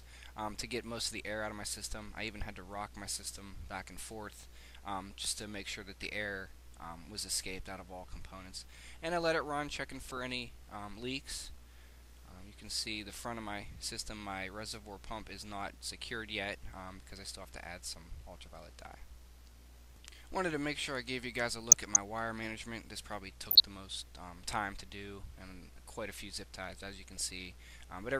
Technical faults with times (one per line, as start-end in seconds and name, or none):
6.03-6.09 DAB burbling
9.92-10.23 DAB burbling
21.72-21.97 DAB burbling
23.49-23.60 DAB burbling
27.07-27.34 DAB burbling